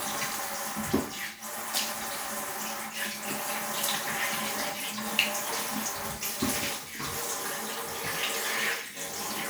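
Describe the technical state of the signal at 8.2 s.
At 8.2 s the signal is intact, with no audible dropout, clipping, distortion or other fault in the sound at that moment.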